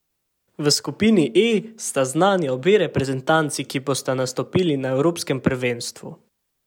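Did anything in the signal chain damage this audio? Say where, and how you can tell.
No, nothing in this speech recording stood out on listening as damage from any stage of the signal chain.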